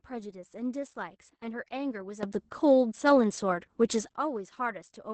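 Opus voice compression runs through the whole recording. The coder is working in its SILK linear-prediction mode at a wideband setting, and the result fits a very low rate of around 10 kbps. At that rate the excitation between predictions is coded coarsely, so the damage is heavy. The speech sounds muffled, hoarse and faintly robotic, and nothing survives above about 8.6 kHz, which leaves sibilants dull.

From 2.23 s to 4.13 s there is a sudden gain jump. The digital level was likely switched in a single step with no ramp, lifting everything by about 12 dB at once. The speech and the compressed background noise both leap upward together, stay at that raised level, then drop back abruptly at 4.13 s. The hard boundaries make each change sound like an abrupt step.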